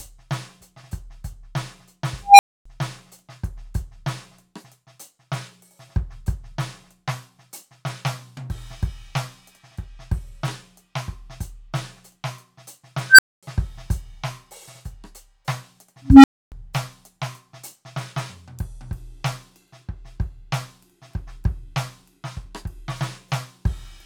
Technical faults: unstable filter

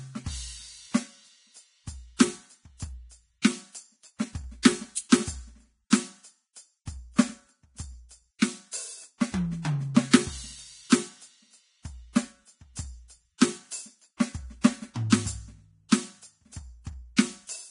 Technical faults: Vorbis compression; pre-echo

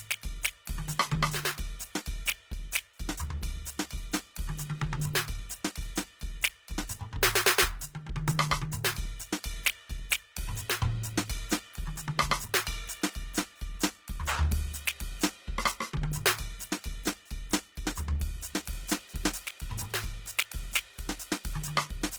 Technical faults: Opus compression; periodic clock jitter

